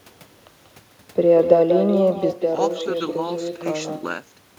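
Every phrase in this speech recording is trailed about a fifth of a second later by a thinner copy roughly 7 dB quieter. That is echo with no canceller: the far end's loudspeaker feeds its microphone and the talker's own audio returns unremoved. From 2.33 s to the end the sound turns abruptly duller and about 10 dB quieter, with a faint new noise floor well below the speech, and no gap at the change, most likely an input switched to a poorer device.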